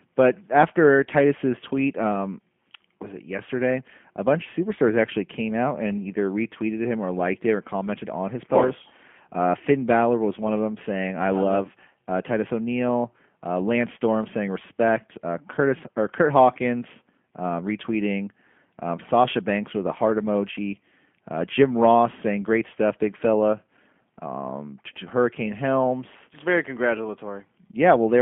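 From start to end, the speech carries G.729 codec damage. The band stops near 3.4 kHz. Pulse-coded rebuilding leaves a rough, buzzy, synthetic edge throughout.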